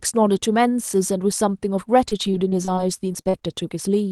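A speech recording carried over a WebRTC call path, with a top end that fits Opus limited to about 12 kHz, breaks up into repeated packet loss (robotic sound) from 2.09 to 3.69 s. Eight short holes, the longest 42 ms, are each patched by stretching the preceding sound, so about a fifth of a second is rebuilt. This makes the voice choppy, with pieces missing. On a spectrogram this shows as smeared, repeating harmonic bands. The waveform shows blocks of near-copied cycles.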